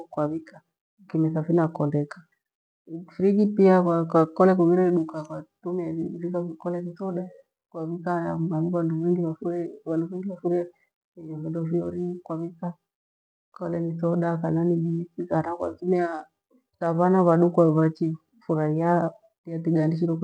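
No technical faults can be heard anywhere in the recording; the signal stays steady and intact throughout.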